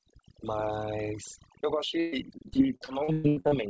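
Overdone noise removal is present from start to finish. The noise suppressor was set so aggressively that any frequency band close to its noise estimate is pushed down or switched off. The quieter parts of the speech are removed along with the noise. Between phrases the background falls to near silence, broken by small twinkling specks. The voice itself has its softer detail stripped away.

From 2.00 s to 3.55 s, repeated packet loss produces a choppy, robotic stretch. The audio breaks into a quick run of short holes, roughly nine of them, the longest about 0.12 s. Each one is patched by extending the previous sound, and the next drop arrives soon after. About a third of this span is concealment rather than real signal. It sounds stuttering, with pieces missing, over a band that stops at 8 kHz, as a G.722 call path would.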